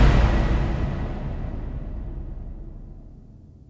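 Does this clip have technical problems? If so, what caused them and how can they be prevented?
No, nothing in the signal needs fixing; it carries the narrowed bandwidth of a call path, with no content above 8 kHz, which fits a wideband codec such as G.722 at 64 kbps working as intended.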